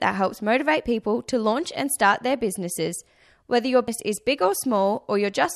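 At 3.88 s, compressed frames are skipped. Several frames, about 85 ms each, never play. The speech jumps forward roughly 0.3 s.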